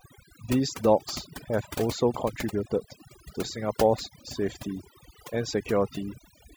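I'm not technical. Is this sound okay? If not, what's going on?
No. Throughout, the speech shows overdone noise removal: a cleanup tool set too strong, leaving twinkling, warbling specks in the near-silent background.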